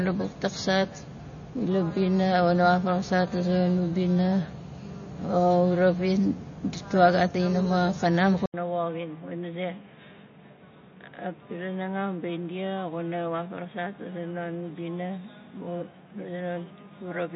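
From the start, the speech has that watery, swirly quality, with s sounds going metallic and chirpy and nothing getting through above about 6.9 kHz. That's most likely MP3 compression working at a starved bitrate, something in the region of 32 kbps. The encoder chops the treble at a fixed point and keeps dropping weak frequency lines in and out from frame to frame, which is where the swirl comes from. It's plainly audible all the way through.

Then at 8.46 s, right after "ditwa gat a inaxaming", there's a brief gap of about 80 ms, and the sound comes back noticeably duller and boxier, about 10 dB quieter, with the top end now stopping at about 3.8 kHz. It sounds like the input switched to a poorer device, likely another mic or a headset dropping into its narrowband call mode. That device also brings its own faint background noise, sitting roughly 35 dB under the speech, and the degraded sound stays that way to the end of the clip.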